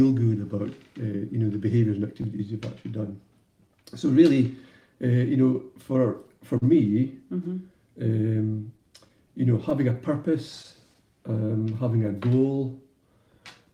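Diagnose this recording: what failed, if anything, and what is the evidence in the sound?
Clock drift between sender and receiver, at the network jitter buffer. The far end's clock runs slow, around 3 percent, so the buffer keeps draining. That's why there are uneven little timing hiccups through the whole clip rather than one clean fault.

Scattered short gaps, also network side. There are about seven between 0.03 and 3.49 s, three between 5.34 and 6.64 s (longest around 40 ms), and about seven more from 8.46 to 10.97 s. Each is papered over by extending the previous sound, so you hear brief ticks or smears.

Repeated timing corrections, the receiver's buffer logic fighting the slow clock. From 0.25 to 13.66 s it keeps repeating small slices, playing at about 98 percent speed and adding roughly 0.3 s overall. This comes across as a slightly dragging, unsteady tempo with faint hiccups.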